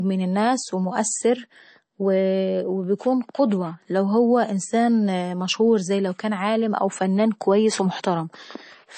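From start to end, the speech sounds dull and boxed-in, with nothing at all above about 8.3 kHz, and the coding damage is plainly audible throughout rather than confined to a few moments. The likely cause is MP3 compression at a low bitrate, which fits roughly 32 kbps. Starved of bits, the encoder cuts the treble at a fixed frequency and throws away weaker detail, trading clarity for a smaller file.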